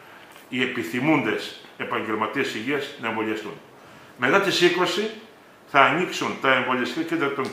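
No technical faults can be heard at any point in the audio.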